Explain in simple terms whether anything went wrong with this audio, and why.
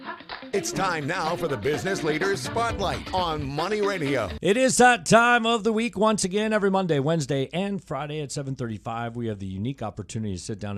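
Nothing went wrong here: the audio signal stays steady and intact the whole way, with no dropouts, breaks or glitches anywhere a listener could point to.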